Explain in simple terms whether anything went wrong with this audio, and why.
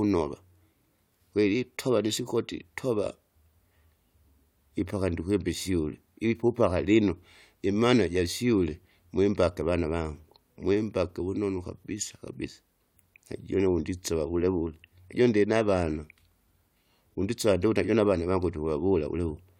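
Nothing went wrong here; the speech comes across as it should, with no glitches, dropouts or strange sounds to point to anywhere along the way.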